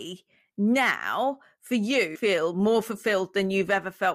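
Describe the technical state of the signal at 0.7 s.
At 0.7 s the speech signal is intact, with no dropout, clipping, glitch or other fault to be heard.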